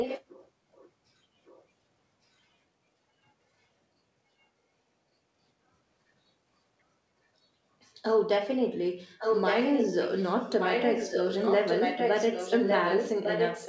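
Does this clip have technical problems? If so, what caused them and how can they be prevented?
Yes. An echo leak is audible: a delayed copy of the speech, trailing it by about 1.16 s, appears at 0–0.24 s, 0.75–0.9 s, 1.45–1.64 s, 8.99–10.24 s and 10.6 s to the end. The first scrap is fairly strong, the next two faint, and the last two as loud as the speech. The likely cause is a far-end loudspeaker whose echo canceller let its microphone pickup through and sent it back. Using headsets, or an echo canceller that can handle a delay of over a second, prevents this.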